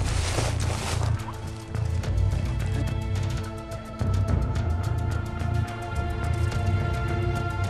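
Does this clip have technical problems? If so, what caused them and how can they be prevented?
No, nothing in the recording points to a technical fault, so there is no cause to trace and nothing to prevent.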